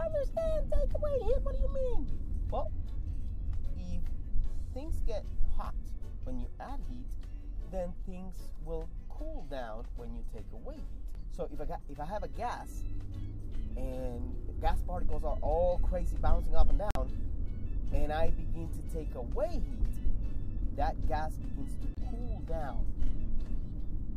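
At 16.91 s the sound drops abruptly to silence for about 66 ms, and again at 21.95 s for about 36 ms: corrupt frame muted. Damaged compressed frames were rejected by the decoder and replaced with silence, the first gap fitting two frame lengths and the second one. Timing stays intact, so the sound resumes on schedule. On a waveform each appears as a flat line with sharp edges; a spectrogram shows a clean vertical blank across all frequencies.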